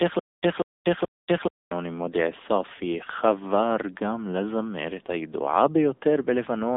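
The clip opens mid-stutter with silent gaps, running to 1.71 s. A 191 ms burst repeats three times, each followed by about 237 ms of digital silence, a 428 ms cycle. A stalled player likely replayed its last fragment at each retry. The speech meant for that stretch is lost.

Throughout, the speech carries the AMR narrowband mobile codec at 7.95 kbps. Nothing passes above 3.8 kHz, and the band sits roughly between 250 Hz and 3.7 kHz. The low bitrate leaves the speech plainly buzzy and synthetic.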